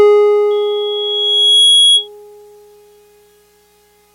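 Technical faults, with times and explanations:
0.50 to 2.08 s, loudspeaker feedback squeal: a 3.3 kHz tone rises out of the music over about a second and ends up a few dB above it. The mic is hearing its own speaker, so that one frequency comes back louder each trip round.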